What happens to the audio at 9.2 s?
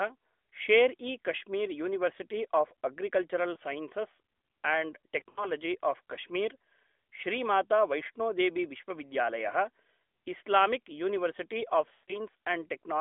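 At 9.2 s the speech is intact, with no dropout, click or distortion, only the narrow 250 Hz to 3.5 kHz telephone band and light coloring of the AMR narrowband mobile codec at 12.2 kbps.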